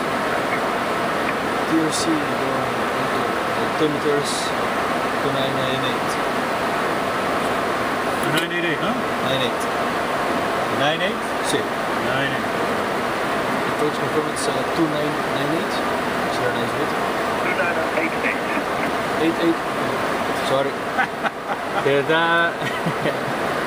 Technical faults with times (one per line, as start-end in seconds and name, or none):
none